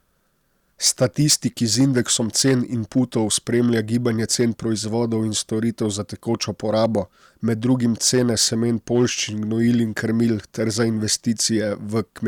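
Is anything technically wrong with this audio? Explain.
Yes. Throughout the speech there is a harsh crackle on the loudest peaks, which is hard clipping. The signal is driven about 7 dB past what the stage can pass, so those peaks are sliced flat, and the squared-off tops spray high harmonics, though only a small fraction of samples are affected.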